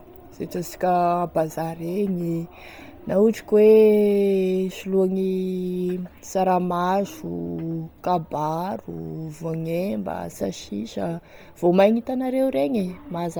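Speech runs with a breathy, grainy edge from start to finish, with the upper spectrum sounding hollow and filled in by a hiss-like wash rather than real detail, and nothing above about 20.1 kHz. The damage is heavy and is likely Bluetooth LC3 compression: the codec strips much of the high band at this low rate, which fits around 32 kbps with 10 ms frames, and substitutes synthetic noise for the missing content.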